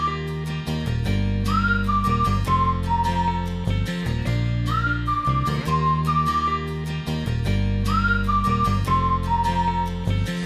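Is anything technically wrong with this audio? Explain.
No, nothing technically wrong can be heard here.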